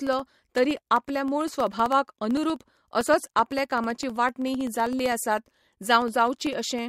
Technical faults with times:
0.07-6.79 periodic USB or driver dropouts

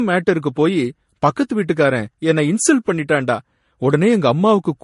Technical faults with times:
0.00-4.83 transcoding between lossy codecs

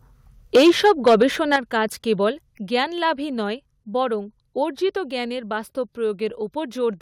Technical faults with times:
0.55-1.23 microphone overload
0.56 microphone volume stepped down
1.53-1.56 microphone overload
1.56 microphone volume stepped down
2.58 microphone volume stepped down

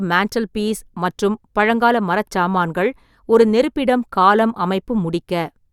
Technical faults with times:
none

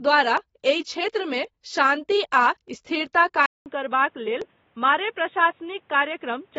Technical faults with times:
0.00-6.58 AAC compression
0.37 dropped samples
1.44 dropped samples
3.46-6.58 input switched to a poorer device
4.42 dropped samples

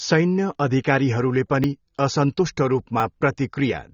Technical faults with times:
0.00-3.93 AAC compression
1.64 dropped buffer (overrun)
3.00 dropped buffer (overrun)

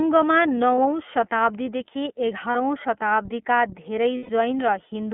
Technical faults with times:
0.00-5.13 iLBC codec
0.75-0.78 lost iLBC frames
2.51-2.56 lost iLBC frames
4.17-4.30 lost iLBC frames

